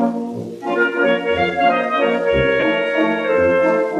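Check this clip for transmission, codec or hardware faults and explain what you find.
One transmission fault is present: lost LE Audio frames from 2.60 to 2.63 s. For about 22.5 ms the Bluetooth link dropped data, which fits three 7.5 ms LC3 frames. The decoder filled the gap by repeating the last spectrum with randomised signs, so tones briefly become a noisy smear.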